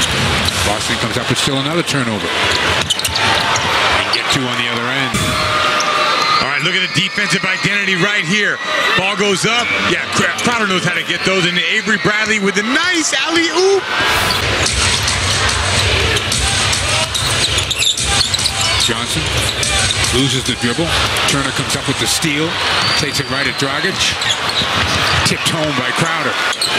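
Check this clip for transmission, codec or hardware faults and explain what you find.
No transmission, codec or hardware faults are audible anywhere in the clip.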